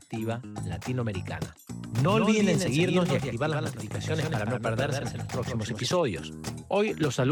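From 1.86 to 5.9 s a doubled audio track appears: one full-band copy trails the original by roughly 150 ms, about 5 dB quieter, switching on and off abruptly. Unlike an echo, it has no decay or room colour, likely from a slower second capture path.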